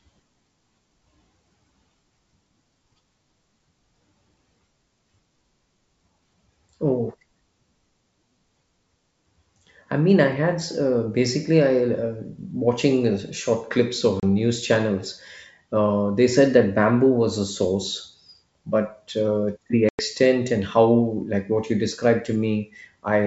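At 14.2 s, after "uh short clips of", a 30 ms hole cuts the speech. At 19.89 s, after "source but uh the", a 100 ms hole follows. Both are packet loss on an ADPCM call. Lost packets become silence. The decoder's predictor is then out of step, so "news channels" and "and how like what" return with brief, slight distortion.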